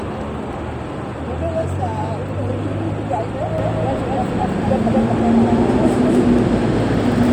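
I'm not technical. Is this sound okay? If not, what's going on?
No. From 3.58 s to the end, the audio likely gets picked up twice, once through a slower route, creating a doubled audio track. A second, equally loud copy trails about a fifth of a second behind, so every sound is followed by a sharp, clean repeat.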